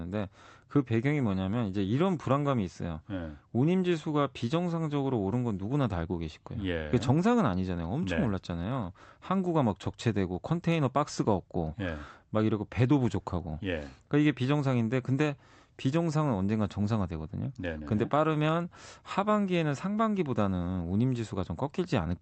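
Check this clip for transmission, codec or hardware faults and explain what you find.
No faults detected.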